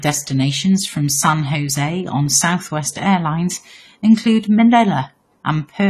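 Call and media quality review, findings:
AAC compression, throughout. Dull, smeared speech with fizzy sibilants and nothing above 14 kHz. Likely an AAC-LC encoder band-limiting and coarsely quantising, consistent with about 32 kbps.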